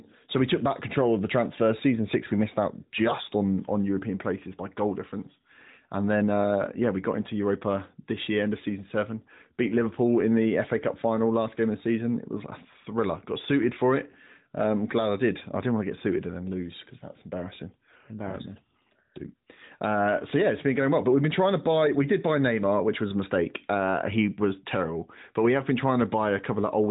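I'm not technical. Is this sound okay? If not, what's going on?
Yes, there's nothing wrong here; it just has that familiar phone-call sound from the AMR narrowband mobile codec, which keeps only the sound below about 3.8 kHz, so it's a bit less bright than a studio recording.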